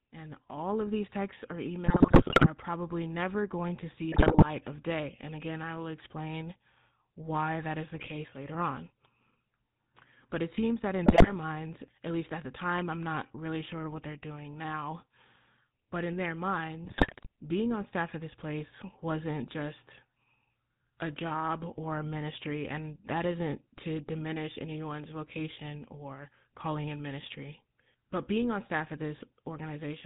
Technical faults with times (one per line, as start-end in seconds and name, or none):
0.00-30.05 GSM full-rate codec
1.86-2.48 GSM bit errors
4.12-4.45 GSM bit errors
7.95-8.11 GSM bit errors
11.06-11.31 GSM bit errors
16.84-17.27 GSM bit errors